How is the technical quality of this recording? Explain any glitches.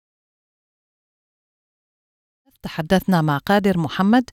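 No glitches or technical faults can be heard here.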